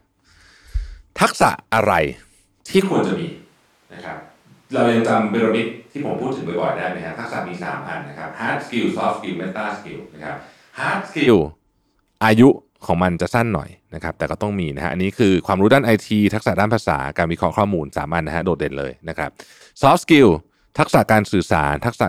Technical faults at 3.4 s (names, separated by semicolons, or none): switch to a distant microphone